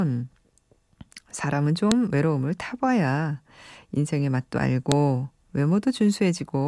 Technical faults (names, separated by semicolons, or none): file header played as audio